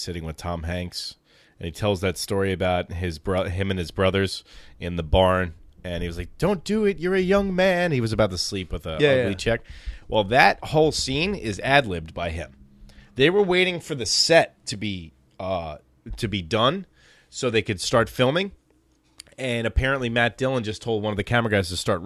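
No technical faults are audible anywhere in the speech recording.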